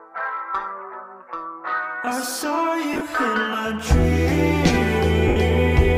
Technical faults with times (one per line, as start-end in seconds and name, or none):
2.93-3.01 lost LE Audio frames
5.28-5.36 lost LE Audio frames